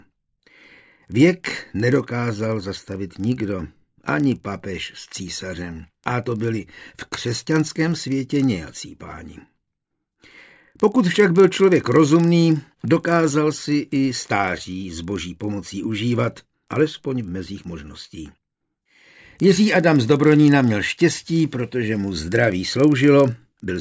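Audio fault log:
Throughout: resampler restarted on every block. The audio was converted from 44.1 kHz to 16 kHz in 40 ms chunks, with the converter reset at each chunk, so every boundary lacks its true neighbouring samples and picks up a small error. That repeats 25 times a second, heard as a steady tick-like buzz riding on the signal and vanishing in gaps. A spectrogram shows thin vertical lines spaced 40 ms apart. The waveform shows tiny discontinuities at the same interval.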